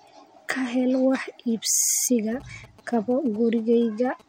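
Speech recording with GSM signalling bursts from 2.32 s to 4.22 s: a galloping dit-dit-dit of short 217 Hz buzzes, well below the speech level. A nearby 2G phone exchanging signalling traffic is transmitting, and the audio circuitry rectifies its radio pulses.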